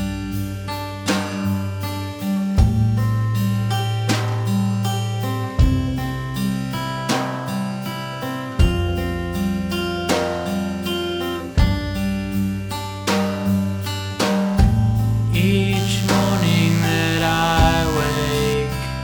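From 15.76 to 18.54 s, a steady, thin 100 Hz buzz with many harmonics: DECT cordless phone buzz, as the audio circuit rectifies radio bursts arriving every 10 ms.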